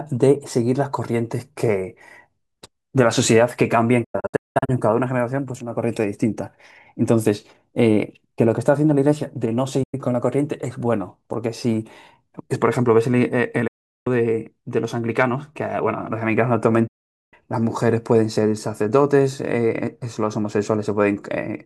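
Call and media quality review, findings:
Digital broadcast dropout, four events. Receiver lost signal or rejected frames on checksum, muted until valid frames returned. Sound fades to silence within about 8 ms, and what was sent during each gap is lost.
4.04–4.70 s: scattered holes over 640 ms, longest 192 ms, hole lengths fitting 32 ms frames.
9.83–9.94 s: single brief mute.
13.67–14.07 s: continuous mute.
16.87–17.34 s: continuous mute.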